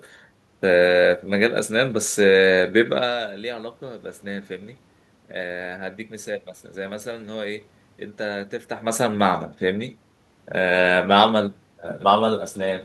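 No technical faults can be heard anywhere in the recording. The room's own background noise sits under the speech, and the level rises and falls around 3 seconds and again around 8.5 seconds as the talker shifts position relative to the microphone.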